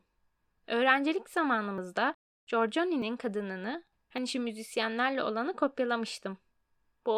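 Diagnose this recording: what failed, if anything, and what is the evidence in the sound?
The speech skips ahead at 1.78, 3.02 and 4.18 s, losing about 20 ms each. Likely a dropped buffer (overrun): the driver overwrote unread samples.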